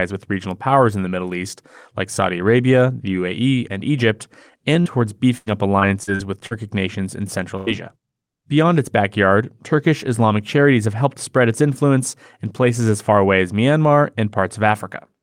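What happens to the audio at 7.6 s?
A burst of packet loss strikes from 7.57 to 7.69 s, just after "nations in". About 100 ms of consecutive packets arrived too late or not at all. The receiver stretched the last sound and faded it down. The speech then picks up again with roughly 100 ms skipped.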